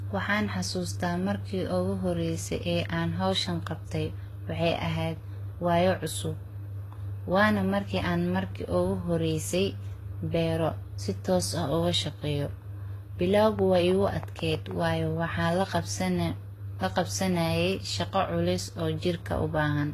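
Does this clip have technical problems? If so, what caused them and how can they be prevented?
Yes. The speech has most likely passed through a chain of lossy codecs: transcoding between lossy codecs, with a low-rate encode that the sound suggests was HE-AAC at around 20 kbit/s, then a re-encode that fits Vorbis at about 32 kbit/s. The second encoder wastes its bits reproducing the first one's damage and adds its own, so both sets of smearing and swirly artefacts sit together throughout, and nothing survives above 14.2 kHz. Prevent it by encoding once from the original source at an adequate bitrate.

From 13.43 to 14.72 s, a train of clicks runs through the audio, with about ten regularly spaced pulses arriving at 6.24 per second and peaking roughly 5 dB above the signal. The cause is likely periodic electrical interference or an interface briefly failing, which injects near-identical pulses that are heard as steady ticking laid over the speech. 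Prevent it by shielding and separating cables from nearby equipment and checking the audio interface's connection and drivers.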